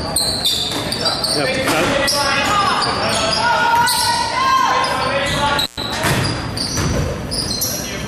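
An intermittent contact fault occurs from 5.60 to 5.84 s: a loose cable or plug briefly loses connection, so the sound drops out for about 111 ms, with crackle as the contact breaks and remakes and only faint hiss left during the gap.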